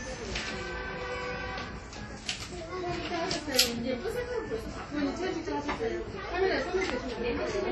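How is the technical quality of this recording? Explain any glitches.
The technical quality is poor: heavy lossy-compression damage runs through the whole recording. From start to finish, these sounds have a ringing, washy texture, with a hiss that swells and fades along with the sound, and nothing is present above 14.4 kHz. The likely cause is WMA compression at a low rate, consistent with about 32 kbps. The transform codec quantises long blocks coarsely, so the error smears across tens of milliseconds, while quieter spectral detail is zeroed out.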